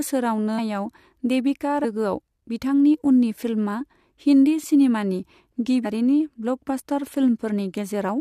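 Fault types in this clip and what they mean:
Damaged data in a compressed stream: corrupted bytes make the decoder lose frame sync. Short garbled blips interrupt the speech at 0.58, 1.83 and 5.84 s.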